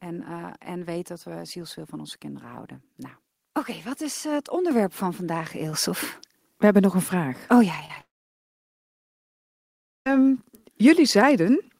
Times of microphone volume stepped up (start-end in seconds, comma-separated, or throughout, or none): 4.71, 5.73